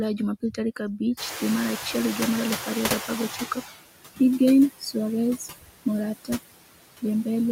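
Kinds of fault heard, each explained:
Noise suppressor artifacts: The suppressor is working frame by frame all the way through, pulling down whatever bands it reckons are steady noise by about 18 dB. You hear the background sink in the gaps and come back up under the speech.
Noise suppressor catching up: The room noise, which is real background and not a fault, jumps up by about 23 dB just after the one-second mark. The suppressor's noise estimate is slow to follow, so from 1.17 s the louder noise comes through with less reduction. It settles down to about 14 dB of cut by 3.71 s, so the suppressor needed about 2.5 s to adapt. Until then you get a noisier stretch that fades as it catches up.
Speech cut by the noise suppressor: Twice the suppressor treats bits of speech as noise and ducks them along with the background. The first is 4.79 to 4.96 s, dropping up to about 15 dB over roughly a tenth of a second. 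The second is 5.37 to 5.86 s and is harsher, going down about 21 dB over around a fifth of a second in total. Those bits sound swallowed.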